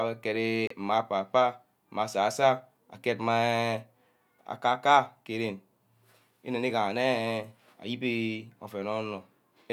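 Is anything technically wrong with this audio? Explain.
Yes. A Bluetooth dropout occurs from 0.67 to 0.74 s. The speech cuts to silence and then resumes further along, as if it had kept playing. This is likely caused by a couple of wireless audio packets arriving too late and being discarded.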